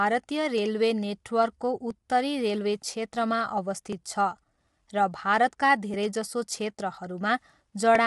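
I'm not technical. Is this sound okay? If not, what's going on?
No. Two things are going on.

The speech sounds rough and grainy, and it lacks the crisp top end you'd expect, with nothing above about 11.6 kHz. This is plainly audible codec damage, likely from low-delay AAC compression, the kind video-call apps use to keep delay short. To save data, the compressor throws away detail it judges less important, and at this setting you can hear what's missing throughout the whole clip.

There are also regular clicks starting at 1.91 s and repeating about every 2.02 s through to about 7.95 s, roughly four in all. The steady rhythm points to clock drift buffer slips as the likely cause. Two devices were each keeping time on their own clocks, and those clocks disagreed very slightly. The audio waiting between them built up or ran short until a tiny chunk of sound was dropped or repeated, producing each click.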